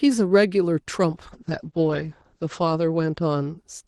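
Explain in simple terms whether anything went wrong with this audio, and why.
Something did go wrong. From about 1.11 s to 3.81 s the speech suffers a call bitrate drop. The call had less room to send sound, so it was squeezed harder. The voice turns rougher and more muffled, losing its top end, which falls from about 12 kHz to about 8 kHz. It is at its worst for just over a second.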